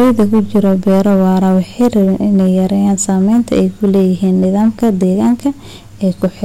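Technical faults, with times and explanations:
Throughout: hard clipping. The speech is driven roughly 8 dB past what the signal path can carry, so every loud syllable has its peaks sheared off flat, with something like 7 percent of samples cut off at the path's limit. The flattened tops generate harmonics high in the spectrum, heard as a harsh fuzz riding on each loud sound. On a waveform the peaks show as squared-off plateaus, and a spectrogram shows broadband smearing up into the high kHz range on loud frames.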